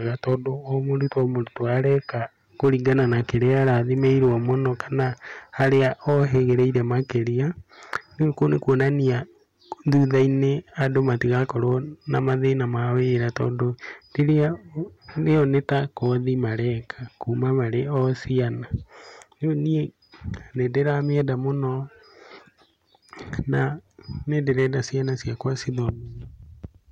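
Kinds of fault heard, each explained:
Hard clipping: the speech was driven about 6 dB past what a stage could pass, so roughly one percent of samples are flattened, adding crackly harshness on peaks.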